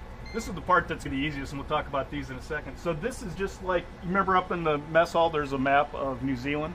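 At 1.05 s there's a quick blip, and a second one from about 3.35 to 3.37 s, both the mark of damaged data in a compressed stream. A stretch of the encoded bytes got corrupted, so the decoder couldn't make sense of those frames, lost its footing and had to hunt for the next valid frame header before carrying on. Each one is short, over in a couple of hundredths of a second.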